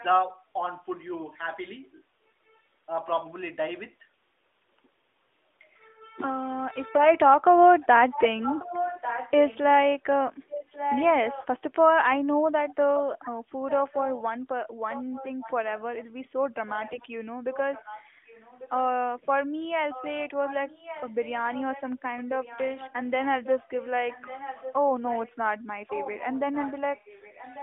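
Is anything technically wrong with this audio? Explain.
Yes. The clip is speech carried over a narrowband mobile link whose band runs roughly 250 Hz to 3.6 kHz, consistent with AMR-NB at its highest rate. Two faults can be heard.

Echo leak appears at 0 to 0.04 s, 7.8 to 9.58 s, 10.49 to 11.47 s, 14.91 to 18.7 s and 19.9 s to the end. A delayed copy of the speech trails it by 1.14 s. It sits about 20 dB below the speech at first, rises to about 10 dB and then about 5 dB below, falls back to about 20 dB, and ends at about 15 dB below. The likely cause is a far-end loudspeaker whose echo canceller let its microphone pick-up return down the line.

AMR bit errors occur at 6.94 to 7.09 s and 16.88 to 17.06 s. Each burst is brief, with three corrupted 20 ms frames in the first and nine in the second. The frames still decoded because their protected core bits checked out. But flipped lower-priority bits misplaced the excitation pulses and skewed the finer pitch, gain and spectral values. 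Level and pitch hold roughly steady, while the sound turns momentarily hoarse and gargly.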